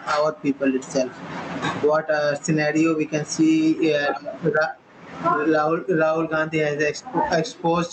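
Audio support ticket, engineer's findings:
Gain pumping throughout the speech. Gain swing around 25 dB. Loud and soft parts pulled close together, squashed. Likely cause: mic gain set far too high, fast limiter/compressor clamping every peak. Upper band stops near 8 kHz, consistent with the Opus call path.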